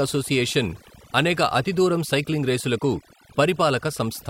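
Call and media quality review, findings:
Overdone noise removal, throughout the speech. Background drops and breaks up into twinkling specks. Probable component: noise suppressor set too aggressive, killing bands near its noise estimate and quiet speech detail with them. Unlike a noise gate, which mutes everything at once, this works band by band, so sparkle remains.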